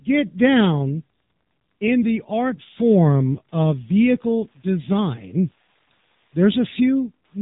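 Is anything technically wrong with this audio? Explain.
Yes, two problems run through the whole clip.

There's Wi-Fi interference: a nearby radio's beacon, every 102.4 ms, gets rectified by the audio circuit, giving a faint, steady tick about ten times a second well under the speech.

The speech has also been through the AMR narrowband mobile codec. Nothing gets through above 3.8 kHz, and the heavy buzzy, synthetic quality points to a low rate, something like 6.7 kbps.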